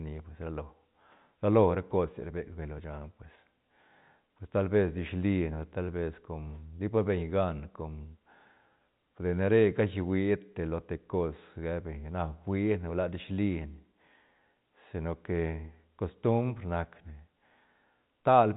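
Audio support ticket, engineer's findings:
No faults found; G.711 A-law telephone band as expected.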